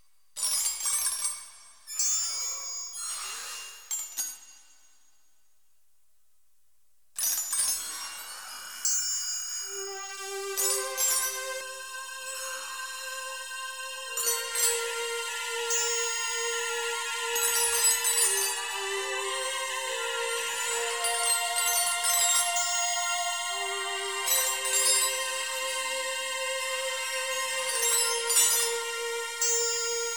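From 11.61 to 14.27 s, channel delay (comb filtering): one channel lags by under a millisecond, so the mono sum sounds hollow, with evenly spaced notches from about 700 Hz upward as horizontal gaps on a spectrogram.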